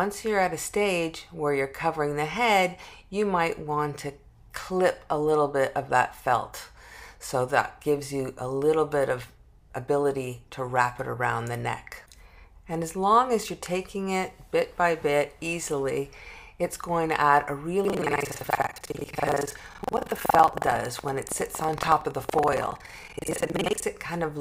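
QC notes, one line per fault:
17.83–23.86 s, buffer tearing: a robotic 21.5 Hz rattle rides on the sound, which fits a 2048-sample buffer. Writer and reader have slipped, so most of each buffer replays audio from about a tenth of a second earlier, with hard joins at both edges.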